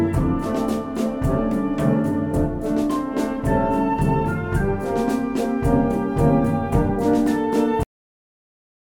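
At 7.83 s the sound stops abruptly in mid-flow, with no fade or natural decay, and the remaining 1.1 s to the end is flat digital silence. This is a cut-off end: the final stretch of audio was never written to the output or played back, so the signal is truncated mid-sound rather than allowed to finish. The hard drop to silence makes the ending sound chopped off.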